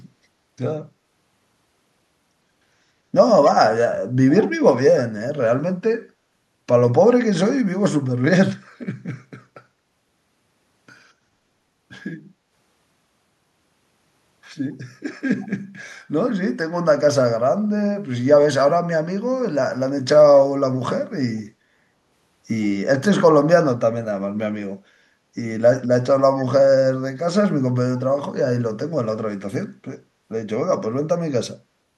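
Speech with a brief echo leak from 15.4 to 15.48 s: a faint copy trailing about 108 ms behind, roughly 30 dB down, likely from a far-end echo canceller letting loudspeaker pickup through, visible on a spectrogram as a weak, shifted duplicate of the speech harmonics.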